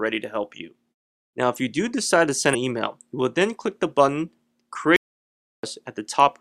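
At 2.53 to 2.55 s there is a brief 20 ms disruption in the sound, the mark of damaged data in a compressed stream. Part of the encoded data there was corrupted, so the decoder misread or rejected those frames and had to find sync again before playback could resume.

From 4.96 to 5.63 s the sound cuts out abruptly to complete silence, with no room tone, and returns mid-flow about 670 ms later; whatever sounded in between is gone. This is likely an audio dropout to silence, where the input was lost while recording carried on writing silence.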